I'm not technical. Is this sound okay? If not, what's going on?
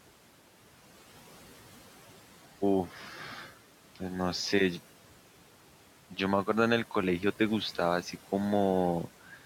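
No. A noise suppressor, the part that tries to remove background hiss, is working too hard throughout. It pushes the room noise down between phrases and lets it back up under the talking, so the background seems to come and go.

There is also speech cut by the noise suppressor. Twice it mistook quiet parts of the talking for background noise and turned them down with it, from 2.89 to 3.2 seconds and again from 9.27 to 9.45 seconds at the very end. Those bits sound swallowed or faint.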